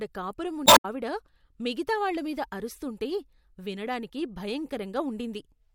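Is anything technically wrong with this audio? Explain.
Yes. From 0.64 to 0.85 s there is damaged data in the compressed stream. Corrupted bytes make the decoder misread frames and lose sync until it finds the next header, producing a brief disruption. A spectrogram shows an abrupt break in the pattern there, and the waveform shows an abrupt discontinuity.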